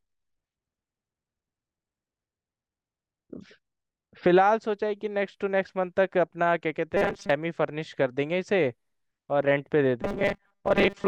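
At 6.97 s the speech turns robotic from repeated short buffers for about 0.35 s, to 7.32 s, and again from 10.02 s to the end. A fixed 200 Hz buzz runs through it, fitting a repeated segment about 5 ms long, likely because new audio arrived too seldom. About half of the first stretch and most of the second is repeated filler, so the sound sounds rigid and metallic while loosely following the speech.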